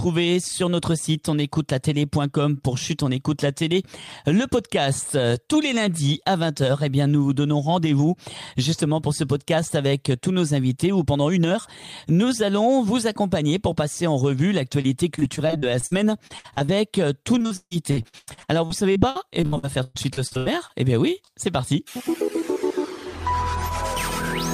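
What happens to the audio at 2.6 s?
Nothing goes wrong at 2.6 s; the audio carries on intact through that moment.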